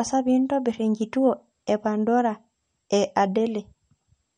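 Throughout, the speech has a watery, swirly quality and nothing above 11 kHz, likely MP3 compression at a low bitrate, around 48 kbps, dropping weak detail frame by frame.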